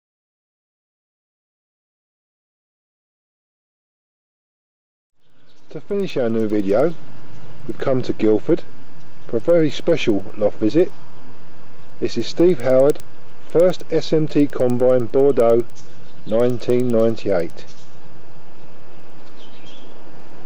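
Throughout the clip, the resampler restarted on every block. Each 100 ms block was converted separately, likely from 16 kHz to 48 kHz, leaving faint ticks ten times per second wherever sound is present.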